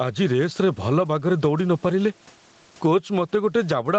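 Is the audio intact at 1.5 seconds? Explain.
No. At 1.5 seconds, as throughout the clip, the level breathes, swinging by around 15 dB, so loud and quiet passages sound squashed together. This is gain pumping, most likely from input gain set far too high and a fast limiter or compressor clamping down on every loud moment, then letting go.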